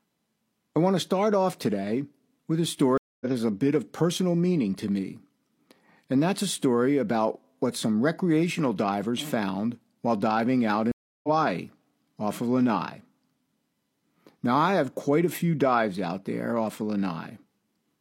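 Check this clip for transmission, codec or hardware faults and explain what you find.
Two stream reconnects break this speech clip, at 2.98 to 3.26 s and 10.92 to 11.29 s. Each time the connection dropped and the player reopened the stream with a fresh decoder, leaving about 231 ms and then 319 ms of silence. The speech resumes roughly a fifth of a second further on, so a short stretch is skipped.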